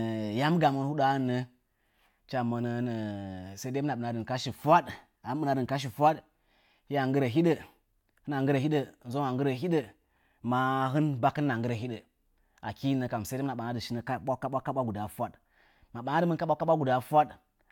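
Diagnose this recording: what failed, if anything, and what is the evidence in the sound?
Nothing failed: no stage of the chain, from capture through to playback, leaves an audible mark on this speech recording.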